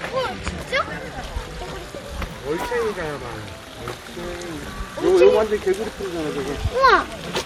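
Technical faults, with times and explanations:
Nothing technical gets in the way here; these sounds come through just as they should, with nothing to flag.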